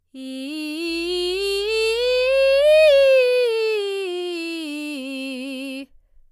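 From about 0.86 s to 3.09 s there's mains hum under the music: a steady 50 Hz drone sitting roughly 25 dB below the program. Power-line current is leaking into the signal path, probably through a ground loop or a nearby transformer, before it drops out again.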